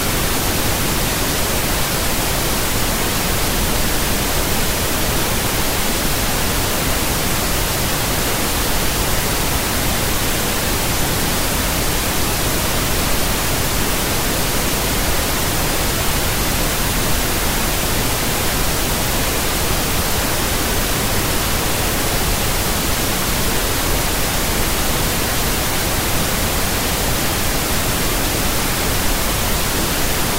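Nothing goes wrong in this recording of sounds; it runs along without a single technical hiccup anywhere you'd care to listen.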